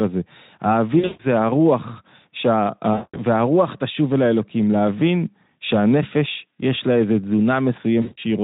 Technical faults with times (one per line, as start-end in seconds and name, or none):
0.99-1.24 VoIP packet loss concealed by the speech codec
2.93-3.20 VoIP packet loss concealed by the speech codec
8.01-8.18 VoIP packet loss concealed by the speech codec